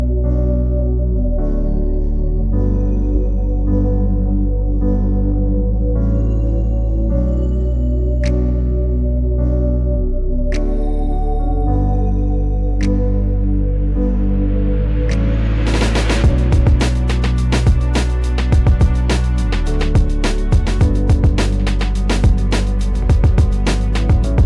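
No technical faults can be heard anywhere in this recording.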